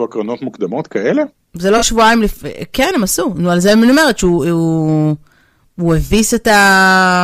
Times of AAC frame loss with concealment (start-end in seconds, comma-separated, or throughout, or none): 1.77-1.84, 6.06-6.12